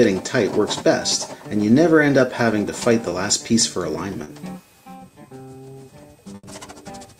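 The audio has two short concealed packet losses and one burst of packet loss, all from packets that didn't arrive in time to be played. The first short one sits at about 3.09 to 3.13 s, where roughly 20 ms of audio never reached the decoder, and the second at about 4.23 to 4.29 s, with about 40 ms gone. In both, the receiver papered over the hole by carrying the preceding sound forward, either from its pitch or as shaped noise, then blended back into the real signal. What you hear is a quick smear or wobble, and anything very short that fell in those gaps is simply missing. The burst of packet loss runs from about 6.35 to 6.45 s. Here around 80 ms was filled in and about 80 ms of the original audio is lost. The receiver extended the last sound and faded it as the gap went on, so you get a held buzz or a fading hiss. The audio then picks up again further along, with that stretch in between skipped.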